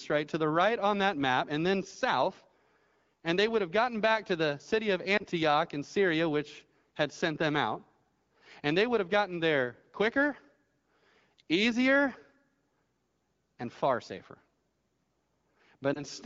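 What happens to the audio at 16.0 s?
A lost AMR speech frame disrupts the audio between 15.94 and 16.03 s. The dropout is short, consistent with a single 20 ms frame that failed its checksum. The AMR-WB decoder, running at 12.65 kbit/s, covered the gap by repeating the last good pitch and vocal tract parameters at reduced gain. The result is a brief dip or warble in the speech, and the voice returns weak or rough for a moment afterward.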